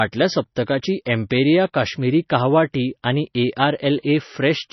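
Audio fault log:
Throughout: MP3 compression, likely at a very low bitrate such as 24 kbps. Nothing survives above 5.9 kHz, and heavy damage leaves the speech watery and swirly with smeared attacks. On a spectrogram there is a hard ceiling at 5.9 kHz and flickering, patchy energy blocks below it.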